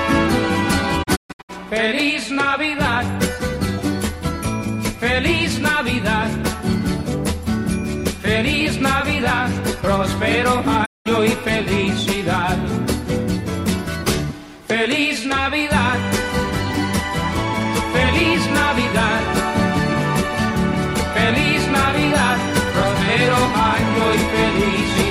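The receiver lost the digital signal twice and muted, a digital broadcast dropout. From 1.02 to 1.51 s the audio fades out in about 20 ms into several short holes totalling 288 ms, the longest 128 ms. Between 10.84 and 11.08 s it drops for 192 ms, and the programme sent meanwhile is gone.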